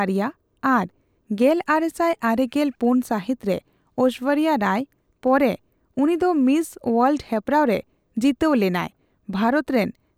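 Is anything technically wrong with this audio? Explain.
Yes. Clock slip clicks run from 0.10 s to the end: a faint, steady rattle of ticks roughly every 20 ms, most obvious on loud, sustained speech. This is likely two unsynchronised clocks differing by around 0.1%, so single samples are dropped or repeated hundreds of times.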